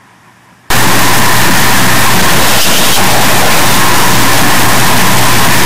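Stuck bit from 0.70 s onward: a top-weight bit, likely pinned by a faulty converter line, throws values off by nearly full scale, causing harsh, buzzy distortion.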